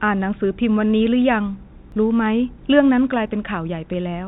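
At 1.92 s there is a sudden jump forward in the speech. This is a dropped buffer (overrun), likely caused by the program collecting its samples too late, so about 20 ms was lost and the two sides were joined directly. From 2.24 to 2.32 s a brief stretch of corrupted samples sits over the speech. These are bit errors on the digital phone line, where a few flipped bits each corrupted a single sample. At 3.27 s a smaller skip, with only a few milliseconds missing, is a second dropped buffer of the same kind.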